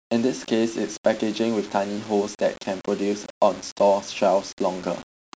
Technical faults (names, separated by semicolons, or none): low bit depth without dither